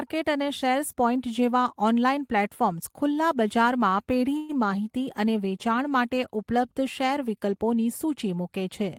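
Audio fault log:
4.37 to 4.51 s, burst of packet loss: right after "ઓનલાઇન પ્લેટફોર્મ્સ ખુલ્લા બજારમાં" the speech stops advancing for about 135 ms. Several consecutive packets never arrived in time, so the receiver stretched the last good sound over roughly 115 ms of the gap, fading it as it went. That is why a held buzz or hiss is heard in place of real speech. About 120 ms of speech is lost, and the voice resumes at "માહિતી અને વેચાણ".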